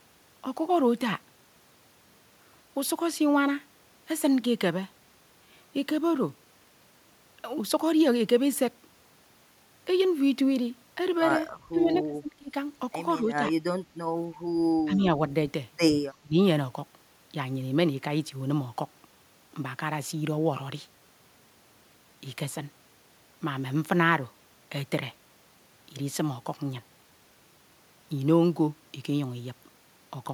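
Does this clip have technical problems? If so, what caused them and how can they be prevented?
Yes. Speech suppressed in double talk: the speech dips at 11.72–12.54 s (by as much as roughly 30 dB), 13.21–13.27 s, 14.85–15.13 s and 16.21–16.38 s. This is likely an echo canceller turning down its own talker along with the loudspeaker echo while both sides talked at once. Full-duplex echo cancellation with gentler double-talk suppression, or a headset on the loudspeaker side, prevents this.

Echo leak: at 11.94–11.98 s a brief copy of the speech returns 251 ms late, about 20 dB below the speech. This is likely loudspeaker pickup that the loudspeaker side's echo canceller did not fully remove. A headset, or lower loudspeaker volume with better echo-canceller tuning, prevents it.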